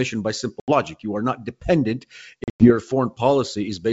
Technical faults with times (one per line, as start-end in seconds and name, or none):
0.60-0.72 packet loss on an ADPCM call
2.44-2.73 packet loss on an ADPCM call